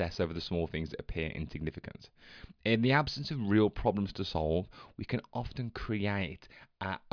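No technical faults are audible.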